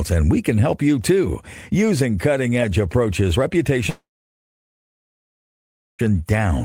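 At 3.89 s the speech turns into a fading buzz, then near silence until 6.01 s, when it resumes with about 2.1 s lost. This is likely a long network dropout, with the receiver padding over missing audio. A spectrogram shows a smeared tail, then an empty gap, and the waveform goes flat.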